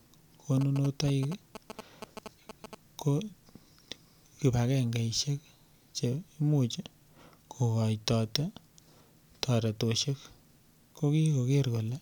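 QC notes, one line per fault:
0.61 to 2.75 s, GSM signalling bursts: there's a galloping dit-dit-dit of short buzzes riding over the speech for about two seconds, sitting roughly 10 dB under it. A 2G phone close by is handshaking with the network, sending clumps of radio bursts that the audio circuitry rectifies into sound. The buzz pitch is the burst repetition at about 217 Hz, and the grouping gives it that stuttering rhythm.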